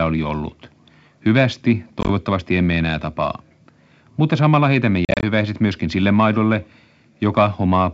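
Around 2.01 s the audio drops out in a scatter of short holes, about 50 ms lost over 80 ms, the longest gap 20 ms. It sounds like packet loss on an ADPCM call. Each hole is hard silence, and when sound resumes the decoder's predictor and step size are out of step with the sender's, so it comes back slightly distorted for a moment. The same thing happens, worse, at 5.05 s: about 110 ms lost across 180 ms, with runs up to 40 ms, over a clean wideband G.722 path.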